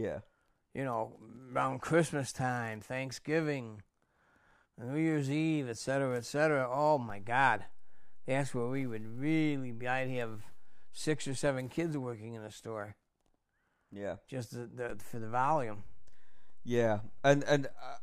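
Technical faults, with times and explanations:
7.10–11.47 s and 14.90 s to the end, DC step: the waveform's zero line jumps by about -39 dBFS just before "kids working in the," then returns. It jumps again by about -38 dBFS and holds. Each shift gives a low thump while the speech runs on intact, unlike a dropout click, which interrupts the sound.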